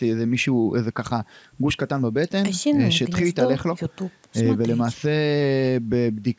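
Nothing stood out on listening to this speech, which has passed through a call's microphone processing and carries nothing above 8 kHz.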